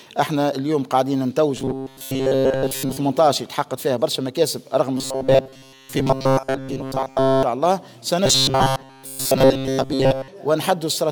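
From 1.57 to 2.97 s, 4.98 to 7.43 s and 8.26 to 10.28 s, the sound takes on a rigid, metallic buzz at 133 Hz: robotic sound from repeated short buffers. The likely cause is audio arriving too slowly, so a slice of about 7.5 ms is looped in place of most of the real signal. Unlike a plain dropout or crackle, nothing goes silent; the fixed buzz pitch gives it away while the rough contour survives.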